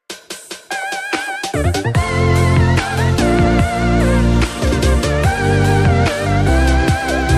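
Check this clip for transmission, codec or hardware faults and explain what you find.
I checked the clip and found no faults to explain.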